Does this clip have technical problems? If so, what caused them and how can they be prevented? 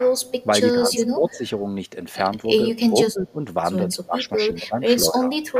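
Yes. Echo leak: the far end's echo canceller likely failed to remove what its loudspeaker fed back into its microphone, so a copy of this speech returns about 177 ms late, from barely audible to fairly clear, at 0.19–0.46, 0.97–1.37, 4.25–4.29 and 5.45–5.52 s. Prevent it with headsets or better-tuned echo cancellation at that end.

Speech suppressed in double talk: while both sides spoke, the echo canceller likely mistook this talker for echo and attenuated them, so the speech dips by roughly 10 to 25 dB in patches between 0.72–1.42, 2.75–3.37 and 3.94–5.38 s. A canceller with stronger double-talk detection, or headsets, would prevent this.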